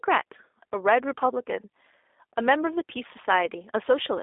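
Throughout, the speech carries plainly audible G.729 codec damage: a rough, faintly synthetic tone from rebuilding each frame out of a few pulses through a vocal tract model, consistent with an 8 kbit/s voice codec. A spectrogram shows energy boxed between 300 Hz and 3.6 kHz, with nothing above 3.7 kHz.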